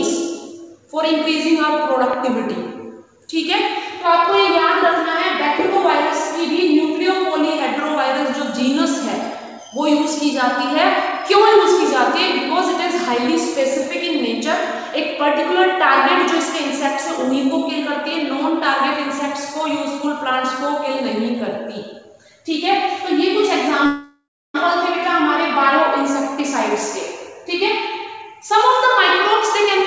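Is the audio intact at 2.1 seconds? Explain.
No. A single loud pop sits on top of the sound from 2.13 to 2.15 s, peaking at about 10 dB above the surrounding level, with the sound carrying on underneath. It is likely caused by a sudden voltage step or pulse, such as a plug, switch, static discharge or driver glitch, shaped by the circuitry that follows. On a waveform it is a sharp, isolated spike. On a spectrogram it is a thin vertical broadband stripe that stops at 8 kHz, the upper limit of the call codec.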